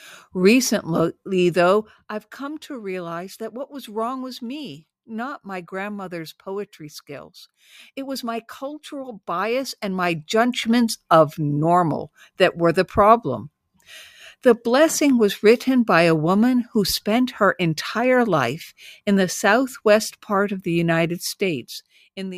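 A speech recording in which the level is being stepped rather than ramped, causing zipper noise twice: from 9.31 to 10.73 s, after "was my cultural", as the level rises roughly 10 dB, and from 21.15 to 22.34 s, after "southwest part of the", as it falls roughly 15 dB. Each unsmoothed step, around forty a second, clicks, giving a ticking buzz over the voice.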